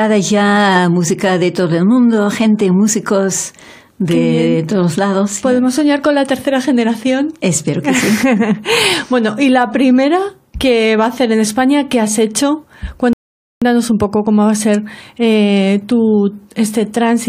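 At 13.13 s the sound drops abruptly into silence and picks up again at 13.62 s exactly where it broke off, with nothing skipped. That is a rebuffering stall: playback exhausted its downloaded audio and paused until more arrived, adding 485 ms of dead air.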